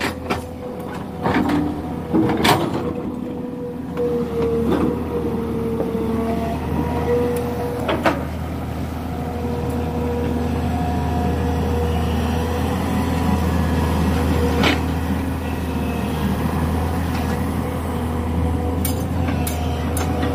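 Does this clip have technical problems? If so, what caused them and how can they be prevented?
Yes. At 0.62 s, a skip ahead: a stretch of audio was discarded, either lost in transit or dropped by an overflowing jitter buffer while later audio was already queued. Playback jumps forward with no gap, losing about a fifth of a second and splicing both sides together. A larger jitter buffer, or dropping audio less aggressively when it overflows, would avoid this.

From 0.72 to 2.09 s comes a jitter buffer speed-up. The buffer held more audio than its target, so the receiver trimmed short pitch-period pieces repeatedly, running about 8% fast at unchanged pitch and removing about a tenth of a second, which makes the sound hurried. A more stable network path would prevent this, as would gentler buffer adaptation that spreads the catch-up over a longer stretch.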